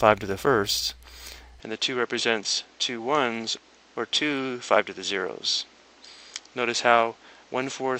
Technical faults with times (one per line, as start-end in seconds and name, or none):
1.60-8.00 input switched to a poorer device